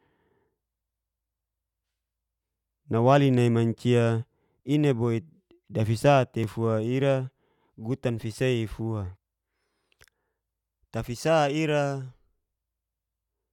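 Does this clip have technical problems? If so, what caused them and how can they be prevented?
Yes. There is one block of digital silence at 6.44 s in this speech. It lasts about 1.5 ms, which fits a single 64-sample buffer. The sound drops straight to silence and returns with no fade. Each edge is an abrupt step, so the gap is heard as one short tick rather than a hole. The missing block points to audio processing that did not deliver a buffer in time. Larger buffers, a higher-priority audio thread, and checks for invalid values would prevent it.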